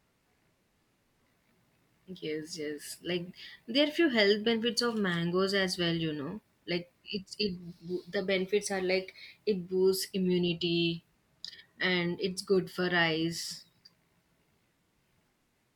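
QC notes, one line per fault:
No faults heard anywhere in the recording.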